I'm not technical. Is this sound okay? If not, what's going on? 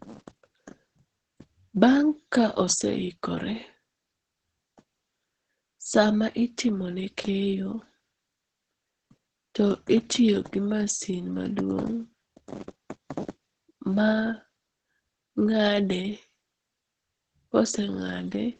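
No. The whole clip has heavy Opus voice compression: speech sounds muffled, hoarse and slightly robotic throughout, not just dull like a plain treble cut.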